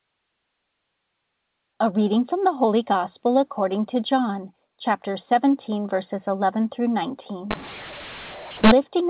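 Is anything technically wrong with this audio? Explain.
Yes. From 7.51 to 8.71 s the speech shows a mu-law and A-law mix-up. The telephone audio is coded as G.711 A-law, with nothing above 4 kHz, but this stretch is decoded as if it were mu-law. Because the two logarithmic curves differ, sample levels come out remapped: some too loud, some too quiet, and near-silent samples lifted well above zero. The result sounds harsh and gritty, and gaps fill with hiss. On a waveform, pauses gain a raised noise floor and the peaks look distorted. A spectrogram shows broadband noise smeared up to the 4 kHz ceiling.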